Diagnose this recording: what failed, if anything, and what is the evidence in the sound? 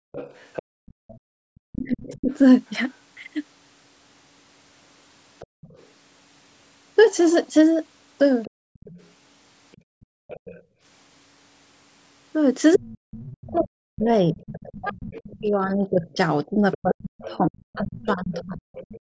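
The call processing's echo canceller, clamping the microphone path while the loudspeaker was active, produces background gating. Between 0.00 and 1.29 s, and again between 5.47 and 10.83 s, the room tone beneath the speech dips sharply, by up to about 40 dB. It comes back each time the canceller releases. The drops are brief, about half a second in total in the first span and about a second in the second.

The other side's voice is leaking through, likely because the echo canceller left residual loudspeaker signal in the microphone feed. From 0.12 s to 19.0 s a second, faint voice sits underneath the talker, roughly 25 dB lower.

Speech is suppressed in double talk, again in the call-processing stage, likely because the canceller could not separate the near talker from the far-end echo when both spoke at once and attenuated everything. From 1.57 to 2.30 s the talker's voice drops by around 40 dB for a fraction of a second. 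From 12.76 s to the end it is suppressed again, with about five seconds lost or heavily dimmed.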